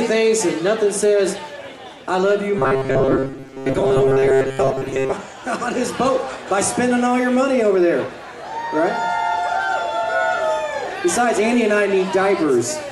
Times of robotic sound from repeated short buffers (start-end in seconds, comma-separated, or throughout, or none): 2.59-5.14